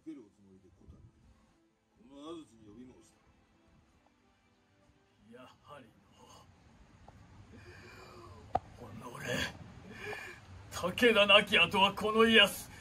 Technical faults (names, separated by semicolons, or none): none